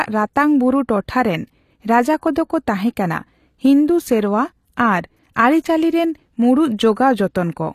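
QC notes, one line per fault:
throughout: HE-AAC compression. The treble sounds rebuilt rather than captured, and nothing reaches above 14.9 kHz. S sounds turn gritty and lispy. This is likely spectral band replication copying lower bands upward, with damage that fits roughly 24 kbps.
2.21 s: pre-echo. A hiss of about 14 ms comes just before a sharp speech attack, which sounds soft. The codec spread its block's quantisation noise evenly, so noise sized for the loud onset leaked into the quiet moment before it.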